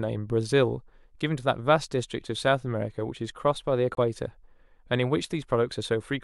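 Corrupt frame muted at 3.94 to 3.99 s: the speech drops into dead silence for 50 ms, starting abruptly with no fade. The compressed stream was damaged at this point, the decoder rejected the affected frames, and the player filled the gap with silence. The length of the hole fits two lost frames of about 25 ms each. Because the frames were blanked rather than dropped, the speech resumes in its correct place and its timing is unchanged.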